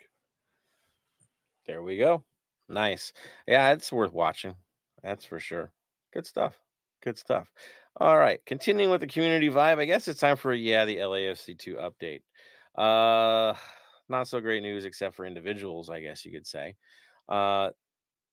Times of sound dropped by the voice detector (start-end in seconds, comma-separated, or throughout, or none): none